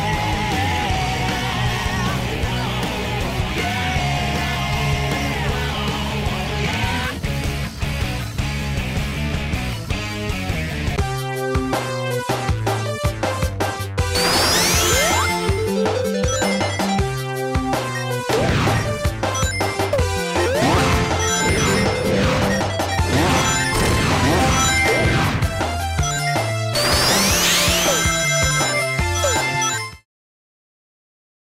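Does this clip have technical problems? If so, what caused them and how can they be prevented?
No, the signal shows no technical problems, and the smooth fade out near the end, beginning around 29.5 s and finishing at 30.06 s, tapers the level gradually as an editor would, with no click or hard edge.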